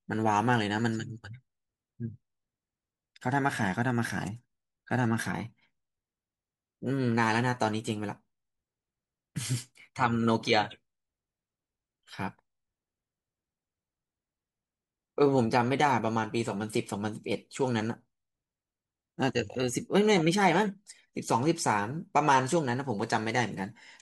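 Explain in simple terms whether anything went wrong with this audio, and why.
Nothing went wrong here: the speech comes through steadily the whole way, with no interruptions or odd sounds to point to.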